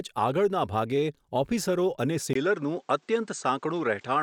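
At 2.33 s the input likely switched to a poorer device: after a 20 ms gap, the speech loses everything above 8.7 kHz and turns duller through to the end, with a faint new background noise and about the same level.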